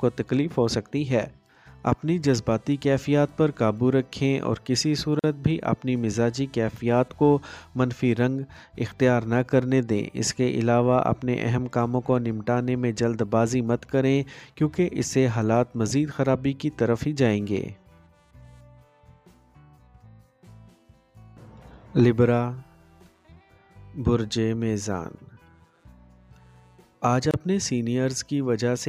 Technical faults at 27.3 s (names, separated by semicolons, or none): gap at a join of encoded pieces